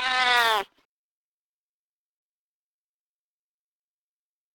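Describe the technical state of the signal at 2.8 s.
At 2.8 s you're right in the middle of a stretch of sample clock jitter that runs from about 0.37 s to the end of the clip. The converter's clock is wobbling, on the order of ten microseconds or so, so each sample lands a touch early or late. The error tracks how steeply the waveform is moving, which gives a grainy hiss riding on the louder, brighter parts of the sound, sitting roughly 20 dB under the signal.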